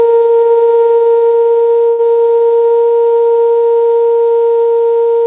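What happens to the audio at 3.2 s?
At 3.2 s the music carries on intact with no dropout, glitch or other fault, and only the steady narrow band of the call path is heard, with nothing above 4 kHz.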